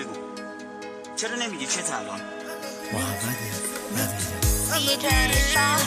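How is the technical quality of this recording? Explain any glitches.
No glitches or technical problems can be heard anywhere.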